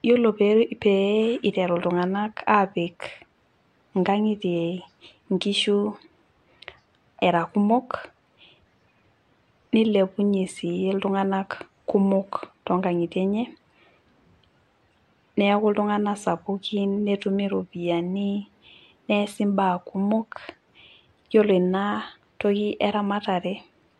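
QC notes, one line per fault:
Nothing to flag here; I listened all the way through and didn't catch a single problem.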